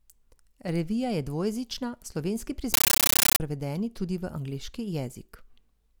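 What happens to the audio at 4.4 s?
Nothing goes wrong at 4.4 s; the speech carries on intact through that moment.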